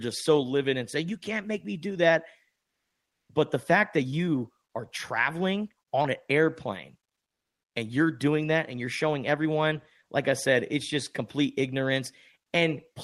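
Right after "make me do that", from 2.65 to 3.29 s, the real background drops out for about 0.64 s and is replaced by comfort noise: a flat, featureless hiss about 3 dB quieter, likely from discontinuous transmission such as Opus DTX filling the pause.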